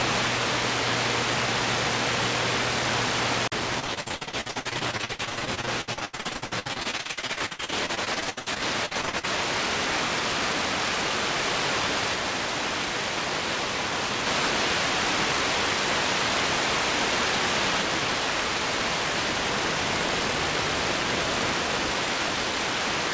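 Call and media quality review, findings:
Repeated packet loss (robotic sound), 3.80 s to 9.25 s. Choppy audio with pieces missing. Dozens of short holes, longest about 82 ms, roughly 2.5 s lost in total. Concealment stretches the last sound across each hole, filling nearly half the span. Probable component: network or jitter buffer. Band limit at 8 kHz fits a wideband call codec such as G.722.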